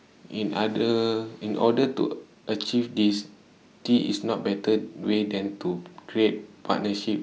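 No technical faults can be heard anywhere in the recording.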